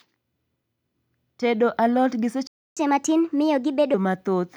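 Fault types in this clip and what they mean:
playback stall: The player most likely ran dry of buffered data or had its thread blocked, so output fell silent. Just after "alot gi" the speech cuts out at 2.47 s for about 290 ms.
catch-up at higher speed: To recover the time lost in the stall, the player resamples its backlog faster than normal. From 2.77 s to 3.94 s the speech runs at 1.25 times speed, with pitch raised by roughly four semitones.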